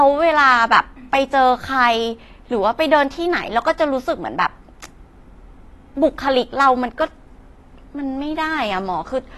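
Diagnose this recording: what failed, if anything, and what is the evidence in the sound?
The codec stage is where this went wrong, and it's audible all the way through the speech. There's nothing above about 12.1 kHz, so the top end sounds dull, and sibilants have a smeared, fizzy edge. That's likely AAC compression, with the damage plainly audible. The encoder quantised the spectrum hard against its hearing model, dropping the highs and thinning the bands it kept, which fits AAC-LC squeezed down to around 32 kbps.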